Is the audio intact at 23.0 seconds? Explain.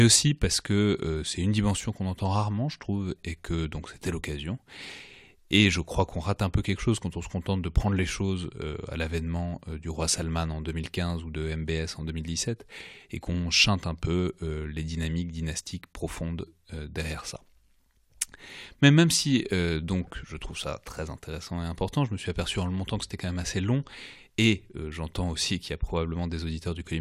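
Yes, the audio is intact at 23.0 seconds, with no audible fault at that point.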